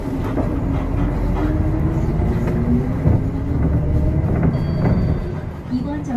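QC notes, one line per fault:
throughout: generation loss. The audio sounds swirly, smeared and hollow, with blurred attacks and nothing above 14 kHz. It was likely encoded around five times over with a lossy codec, consistent with AAC-LC at about 64 kbit/s, each pass requantising on a shifted frame grid so noise and gaps compound. On a spectrogram there is a hard ceiling at 14 kHz, patchy holes and speckled blocks below it, and transients smeared across frames. The waveform shows softened onsets.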